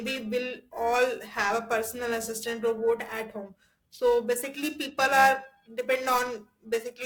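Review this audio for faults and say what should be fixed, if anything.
A rough, metallic edge rides on the speech from start to finish and drops away in the pauses. It comes from periodic clock jitter: interference wobbling the converter's clock at around 1 kHz adds sidebands at that spacing around every component, strongest on the brightest sounds. Fix it by giving the converter a clean, well-isolated clock supply, away from the interference source.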